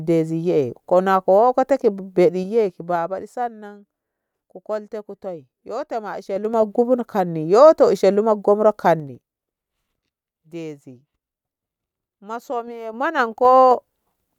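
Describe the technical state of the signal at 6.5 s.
At 6.5 s there is zipper noise, from 6.23 to 6.66 s, just after "kolte kutai yoto ma". The level jumps in unsmoothed 3 dB steps, about ten a second, each clicking audibly.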